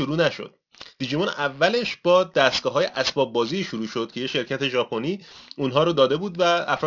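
Aliasing runs through the whole speech clip: content above 6 kHz was folded back down, which fits a drop to a 12 kHz rate without filtering. Sibilants turn gritty and metallic, with stray tones roughly 15 dB under the speech, rather than simply dulled as with a low-pass filter.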